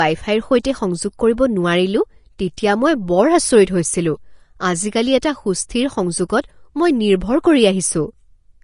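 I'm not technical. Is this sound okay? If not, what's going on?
No. The whole recording has a hissy, grainy edge. Nothing is heard above about 10.6 kHz, so the speech sounds dull at the top. Consonants are blurred and rough. The likely cause is Vorbis compression, squeezed hard to save space.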